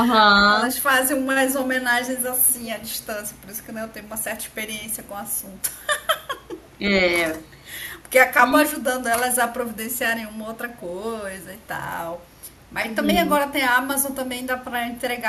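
From 2.43 to 3.06 s a faint delayed copy of the speech trails the original by 365 ms, sitting roughly 25 dB below it. This is an echo leak: a far end playing the call over a loudspeaker likely had an echo canceller that left some of the pickup in place and sent it back. Unlike room reverberation, which smears continuously, this is a distinct second copy offset by a fixed delay.

Between 13.28 and 13.48 s the speech dips sharply, by around 20 dB at its deepest, in brief pieces adding up to roughly a tenth of a second. This is speech suppressed in double talk: with both sides talking at once, the echo canceller likely could not tell the local talker from loudspeaker echo and pulled both down. Unlike a network dropout, the level sags in pieces rather than cutting cleanly to silence.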